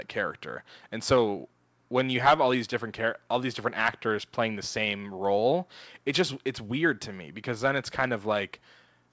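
It's a speech recording with nothing technically wrong in it, just the ordinary character of a call path, with the content stopping around 8 kHz as you'd expect from a wideband call codec like G.722.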